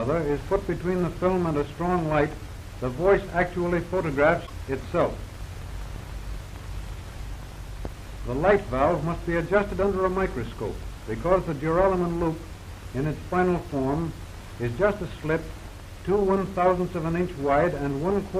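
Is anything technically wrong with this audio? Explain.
Yes, there's one glitch. From about 4.46 to 4.50 s, roughly 44 ms, the audio skips and breaks up briefly. It's likely a broken MP3 bit reservoir. MP3 frames can park part of their data in earlier frames, and if some frames go missing, the next one reaches back and decodes the wrong bytes. The 26.1 ms frame length fits standard MP3 frames at 44.1 kHz, so this spans under two frames.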